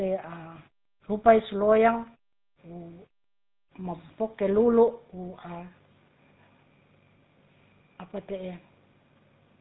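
Throughout, the GSM full-rate codec's sparse pulse excitation adds a gravelly buzz below a 4 kHz ceiling, a grit plain band-limiting wouldn't cause, which fits a 13 kbps stream.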